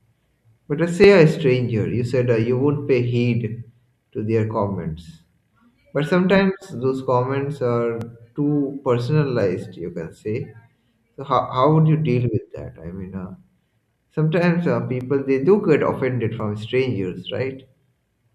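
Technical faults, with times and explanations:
1.04–17.8 s, clock drift buffer slips: regular clicks roughly every 1.4 s through the speech, likely from mismatched device clocks forcing small blocks of samples to be dropped or repeated.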